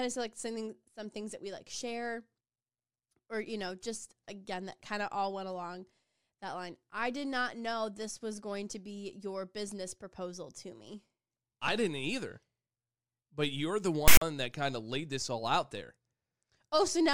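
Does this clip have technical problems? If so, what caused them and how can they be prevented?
Yes. At 14.08 s the speech is cut by a harsh, loud rasp with abrupt edges that drops into dead silence before the clip resumes at 14.22 s, about 0.14 s in all. This is file tags played as audio: a block of text metadata and its zero padding was decoded as sample data, so the character bytes became a lopsided buzz and the padding became silence. Prevent it by having the decoder skip tag blocks.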